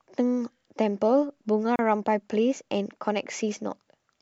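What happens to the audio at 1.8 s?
A gap at a join of encoded pieces opens from 1.76 to 1.79 s, a gap of about 32 ms. The speech here was encoded in separate pieces and then joined without trimming, so the encoder's start-up delay and the padding of the previous piece's last frame both remain at the seam. The result is a short dropout with smeared edges, after which the speech resumes exactly where it stopped.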